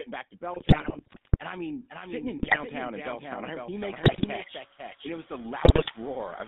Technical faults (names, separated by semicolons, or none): noise suppressor artifacts; GSM full-rate codec; GSM bit errors